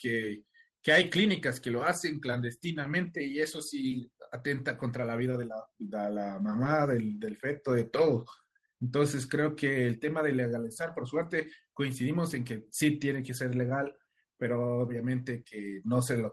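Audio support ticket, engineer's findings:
Short concealed packet loss, five spots: 3.27–3.29, 5.30–5.33, 6.64–6.66, 8.36–8.39 and 15.48–15.52 s. Brief smears and wobbles, 10 to 30 ms each; the longest is the 15.5 s one. Receiver's jitter buffer / decoder concealment. Packets arrived late or not at all, so it stretched the last bit of sound and crossfaded back. Over an Opus path topping out around 12 kHz, which fits a roughly 20 kbps stream.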